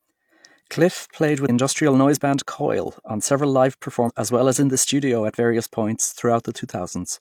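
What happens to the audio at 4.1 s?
Around 4.04 to 4.11 s the speech jumps forward: compressed frames skipped. About seven frames of roughly 46 ms each didn't get played, so close to 400 ms of audio just vanishes. The join is heard as a sudden jump where the speech picks up further along.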